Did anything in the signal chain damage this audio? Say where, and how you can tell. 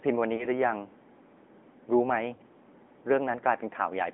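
Yes. The codec stage is at fault: the speech passed through the AMR narrowband mobile codec. Throughout, the band is confined to about 200 Hz to 3.5 kHz, and the voice has a plainly audible buzzy, synthetic edge. That fits a mid-rate mode of roughly 10 kbps, which models the voice coarsely.

At the network stage, lost AMR speech frames occur at 0.36 to 0.48 s and again at 2.36 to 2.40 s. Each event sounds like a single 20 ms frame dropped by radio errors. The decoder patched each gap by reusing the previous frame's settings at lower gain, which produces a brief dip or warble before the voice recovers.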